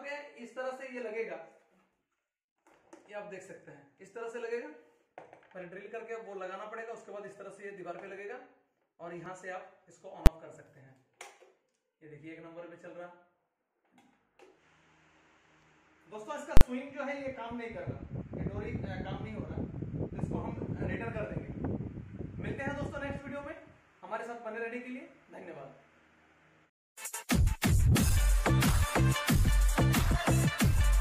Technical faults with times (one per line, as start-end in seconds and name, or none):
10.26 invalid numbers at full scale
16.57-16.61 invalid numbers at full scale